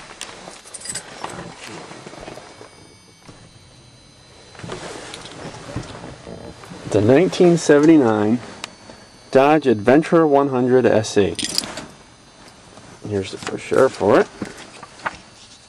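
Hard clipping occurs at 7.09–8.10 s, 9.35–10.39 s, 10.86–11.19 s and 13.79–14.18 s. Peaks driven about 3 to 4 dB past a stage's limit are flattened, adding high harmonics heard as distortion.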